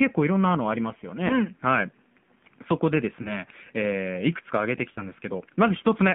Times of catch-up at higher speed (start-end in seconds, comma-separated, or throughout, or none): none